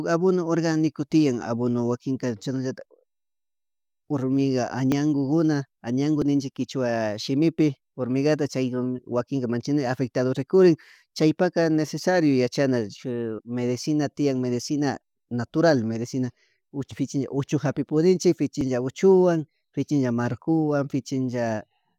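At 4.92 s the sound jumps forward without any gap. This is most likely a dropped buffer (overrun): the input samples were overwritten before the software collected them, so a sliver of only a millisecond or two vanished and the two sides were butted together. The same jump returns at 6.22 s, just before "ninchik kichuwa shimipi hormigata", and at 18.61 s, right after "fichi uchu japi pudinchik".

At 13.37 s, just before "medicina tian medicina", compressed frames were skipped. The decoder jumped past about a tenth of a second of audio, which fits four of the 23.2 ms frames, and resumed later. Unlike the overrun skips, this jump is far longer, so more of the sound goes missing.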